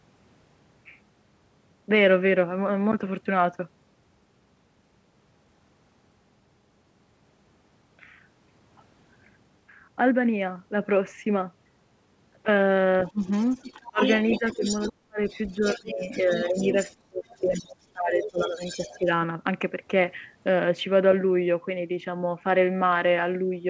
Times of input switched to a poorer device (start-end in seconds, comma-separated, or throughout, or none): none